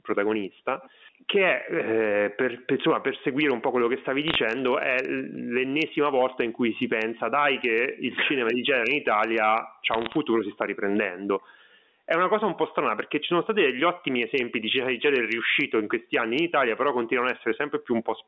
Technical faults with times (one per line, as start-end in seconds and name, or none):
0.00-18.28 gain pumping
4.28-4.35 bit errors on a digital phone line
9.92-10.16 bit errors on a digital phone line